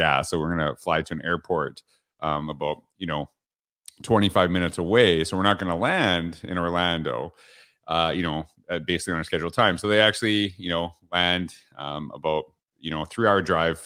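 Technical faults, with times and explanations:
Nothing technical stands out in this speech recording, so there's no fault to list here.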